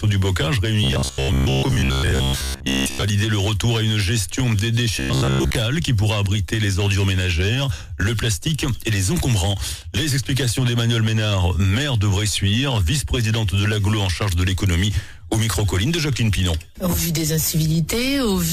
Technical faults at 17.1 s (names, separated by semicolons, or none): none